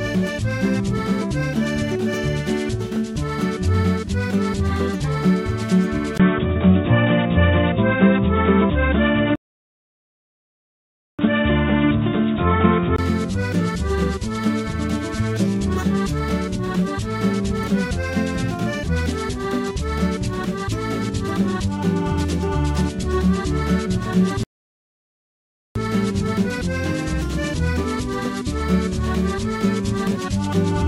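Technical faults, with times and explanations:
6.18–12.98 s, input switched to a poorer device: after a 20 ms dropout the sound turns dull and boxy, a level shift of a few dB and a faint new noise floor. It clears again at 12.98 s. Most likely the recording jumped to a narrower-band mic or headset profile.
9.36 s and 24.43 s, playback stall: the output goes dead for 1.83 s, then for 1.32 s, before the sound picks up again. That's the likely sign of the player running out of data or its thread getting blocked, leaving nothing to play until it recovered.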